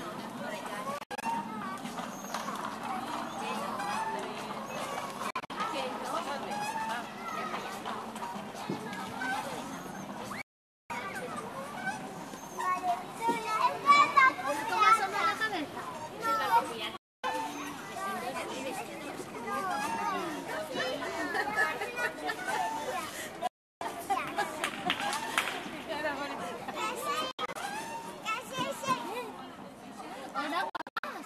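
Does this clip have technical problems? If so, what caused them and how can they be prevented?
Yes, there's digital broadcast dropout: the receiver muted on corrupted frames, so the sound cuts out with a 3 ms fade at 0.98, 5.30, 10.42, 16.97, 23.47, 27.31 and 30.70 s, some as scattered holes, the longest 0.48 s at 10.42 s. A stronger, cleaner received signal prevents it.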